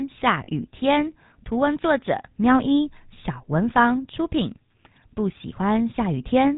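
Throughout, the speech carries the buzzy, gravelly roughness of the GSM full-rate codec. Nothing passes above 4 kHz, and the coarse pulse excitation fits 13 kbps. From 0.44 to 0.49 s, lost GSM frames cover 40 ms, which fits two missing frames. The last good sound is held and repeated, giving a brief rough, metallic ring.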